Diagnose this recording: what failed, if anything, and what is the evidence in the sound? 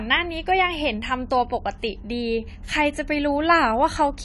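The codec stage is at fault: the speech is dull and smeared from start to finish, with a warbling, fizzy texture on sustained vowels and sibilants, and there is nothing above 11.5 kHz. This is likely AAC compression, with AAC-LC quantising each frame's spectrum so coarsely that the top is cut off and bands are left patchy, which fits a bitrate around 32 kbps. A spectrogram shows a flat ceiling at 11.5 kHz and blotchy, holed upper bands.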